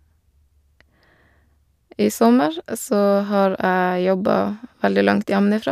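No technical faults can be heard in this speech recording.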